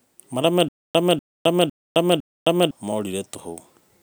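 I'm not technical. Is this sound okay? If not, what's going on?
No. From 0.69 to 2.71 s there is a stutter with silent gaps: the same quarter-second bit of speech repeats four times, each followed by dead silence, every half second. Unlike a plain dropout, the fragment repeats. Playback likely stalled, losing that stretch of speech.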